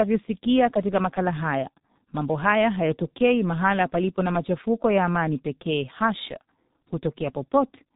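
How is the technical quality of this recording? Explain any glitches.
The quality is poor throughout: G.723.1 codec damage runs the whole length, with nothing passing above 4 kHz. Its slow 30 ms frame updates leave speech muffled, hoarse and consonant-smeared, which fits roughly 6.3 kbit/s. Simple band-limiting would stay clean rather than rough.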